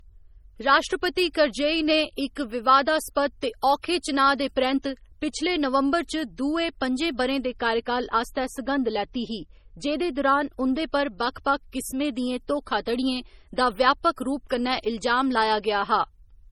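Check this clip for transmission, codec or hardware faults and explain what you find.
Two things stand out, one running through the whole recording and one short stretch in the middle.

Throughout, the speech has the smeared, swirly texture of a heavily squeezed MP3, with content stopping at about 19.2 kHz, even though the file is stored at a generous rate. That's likely low-bitrate audio saved at a high bitrate: the artefacts fit a 32 kbit/s MP3 that was re-encoded at 320 kbit/s. The second pass just preserves the first one's losses, so the extra size doesn't bring anything back.

From 7.46 to 10.62 s, just before "उं'दे पर बक्ख बक्ख", the speech suddenly goes dull and muffled, with the top end rolled off smoothly to about 8 dB down at 10 kHz relative to 1 kHz. That's de-emphasis applied wrongly: a treble cut meant to undo pre-emphasis was applied to audio that never had that boost, or was applied twice. 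Either way, the extra cut just takes away high-frequency detail for that stretch.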